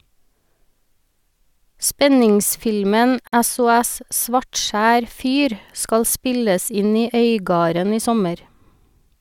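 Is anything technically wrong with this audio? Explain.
Yes. The speech has a gap at a join of encoded pieces. From 3.27 to 3.33 s, the sound drops out for 53.5 ms. The audio was likely encoded in separate pieces and spliced without trimming. Each encoder pass leaves silence at its start and pads its final frame, and that silence stays in at the seam. The gap opens and closes with edges smeared by the codec. The speech then resumes exactly where it stopped.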